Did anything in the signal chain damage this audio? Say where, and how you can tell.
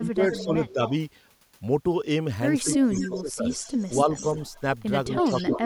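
Yes. The speech dips and thins in four places: 0.0 to 0.92 s and 2.64 to 3.48 s, where it falls by up to about 15 dB for roughly half a second or more, and more lightly, about 5 dB, at 4.05 to 4.23 s and from 5.07 s to the end. This is speech suppressed in double talk in the call processing stage. An echo canceller that likely could not separate this talker from the far-end echo turned both down together.

A fainter delayed copy of the voice trails behind it at 0.31 to 0.93 s, 2.72 to 4.61 s and 5.15 to 5.6 s. It lags by a steady 217 to 223 ms and sits about 10 dB below the direct speech, rising to about 5 dB below in the last stretch. That consistent lag marks an echo leak, also in call processing. A loudspeaker-side echo canceller likely left part of its microphone pickup in place and sent it back down the line.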